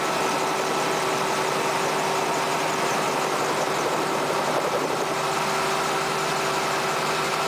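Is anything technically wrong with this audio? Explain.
No, nothing technically wrong can be heard here.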